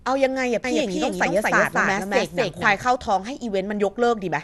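From the first moment the speech has that dull, gurgly, granular texture you'd associate with MP2 compression, likely at a low rate around 80 kbps. Nothing comes through above about 12.2 kHz, with the upper sub-bands shut off and the bands that remain flickering and coarsely quantised.

From 0.64 s to 2.82 s there's a doubled audio track, likely a second capture path running late. A full-band copy trails by about a fifth of a second at roughly the same level, with no room tail, and it switches in and out abruptly.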